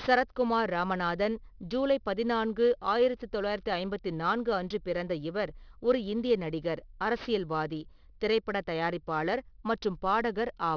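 Aliasing runs through the whole speech clip. The sound fits a drop from 48 kHz to 11 kHz without an anti-aliasing filter, so energy above 5.5 kHz folds back below it at unrelated frequencies, about 25 dB under the speech. Sibilants turn gritty and metallic, and the spectrum stays full right up to the 5.5 kHz edge. A properly filtered downsample would only sound dull and muffled, with none of that false, clashing hiss.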